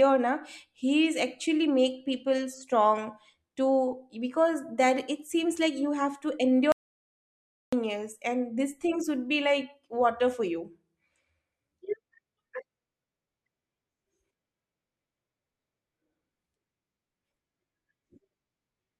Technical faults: audio dropout to silence

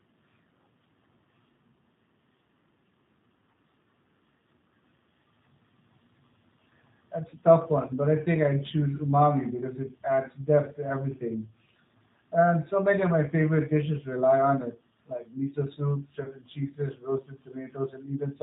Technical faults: G.729 codec; VoIP packet loss concealed by the speech codec

